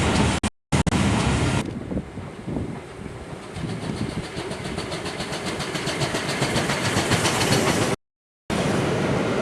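A digital broadcast dropout hits at 0.38 s. The sound mutes in several short holes until 0.92 s, 360 ms lost in all, the longest gap 240 ms. A second dropout silences 7.94 to 8.50 s. Each hole fades out within 3 ms. The receiver muted failed frames, whose gaps point to roughly 24 ms frames.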